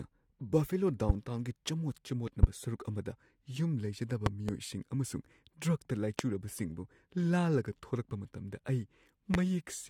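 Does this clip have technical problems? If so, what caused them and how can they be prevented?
Yes. Loud pops occur at 1.09, 2.43, 6.19 and 9.34 s, with a pair between 4.26 and 4.51 s. Each peaks at roughly 20 to 25 dB above the speech, which continues underneath. A sudden voltage pulse, likely from a connector, switch or static discharge, enters the signal path, and the following circuitry shapes it into a thump. Securing cables, avoiding switching or plugging during recording, and grounding equipment properly prevents them.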